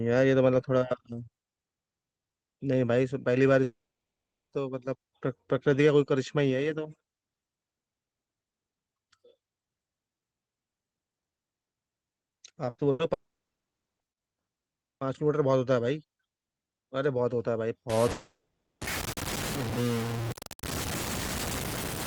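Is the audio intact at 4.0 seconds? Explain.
No. Audio packets likely stopped arriving from 3.63 to 4.53 s in a long network dropout, so the receiver briefly extended the last sound before leaving about 0.8 s of silence.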